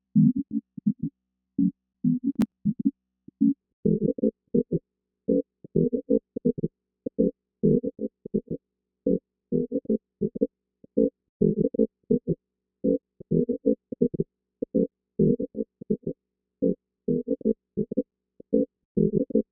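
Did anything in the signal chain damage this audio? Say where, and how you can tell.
Yes. The driver and buffer stage failed under processor load: from 2.32 to 2.52 s there is a burst of processor overload crackle, a gritty tearing laid over the audio that stops abruptly once the load passes. The processor missed a run of buffer deadlines, and each missed buffer was skipped rather than held, leaving short hard-edged gaps. The spacing of the ticks points to buffers of roughly 10 ms, with around ten missed over the burst.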